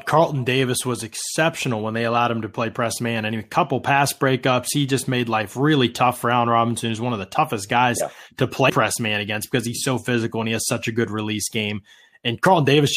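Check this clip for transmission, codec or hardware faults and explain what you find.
One fault turns up in this speech clip: damaged data in the compressed stream at 8.69 s. A short stretch of the encoded bitstream arrived corrupted, so the decoder could not parse the frame there, lost its place in the stream and had to hunt for the next valid frame header before it could resume. For roughly a hundredth of a second the output is garbage, heard as a brief chirp or blip cutting across the speech.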